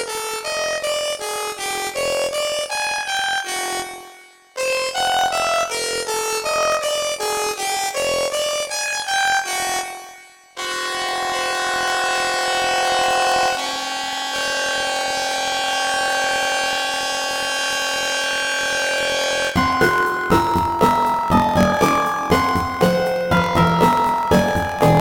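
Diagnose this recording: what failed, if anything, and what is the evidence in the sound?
The failure is at the sample-format conversion stage: planar audio read as interleaved, present from start to end. Each 23.22 ms block, which fits 1024-sample blocks, holds all of one channel followed by all of the other, but it is read as alternating pairs. Each half therefore plays at double speed, one channel after the other. The sound is an octave (12 semitones) high with a flutter at 43.1 Hz, yet the overall pace stays correct. That steady pace rules out a plain sample-rate mismatch, which would shift both pitch and tempo.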